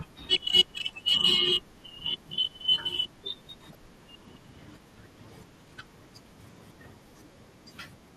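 All the way through, the speech sounds dull and granular, with a gurgly edge, most likely from MP2 compression. Layer II is starved of bits, so the upper sub-bands drop out and the rest are coarsely quantised, which fits a rate of around 80 kbps.

At 0.36 s there's a brief blip of DAB burbling, and a longer patch runs from 3.70 to 3.75 s. Bit errors got past the error correction and threw individual sub-bands off for what sounds like a few frames, with the second hit sounding like a noticeably higher error rate.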